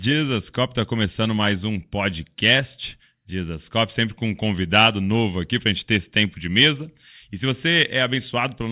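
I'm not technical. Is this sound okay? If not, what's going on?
Yes, nothing stood out as a problem when listening to this recording.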